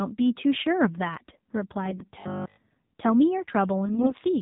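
The whole clip sounds buzzy, boxy and somewhat synthetic, with nothing above 4 kHz. This is the AMR narrowband mobile codec: the voice is rebuilt from a vocal-tract model driven by sparse pulses, and the plainly audible coarseness fits a low rate around 7.4 kbps.

From 1.86 to 2.07 s the speech turns hoarse and gargly while keeping its pitch and level. These are AMR bit errors: on a weak link, flipped bits in the less protected parts of the frames scramble the pulse positions and finer gain and spectral values, at a rate of roughly a tenth of the bits.

From 2.20 to 2.58 s the sound collapses into a rigid metallic buzz at 50 Hz, the robotic sound from repeated short buffers. Audio arriving too seldom was likely covered by looping the last 20 ms over and over, apparently for the whole stretch, imposing that fixed pitch.

From 3.86 to 4.13 s the gargly, scratchy roughness of AMR bit errors returns, with a higher error rate of around 15 percent corrupting the frames across that stretch.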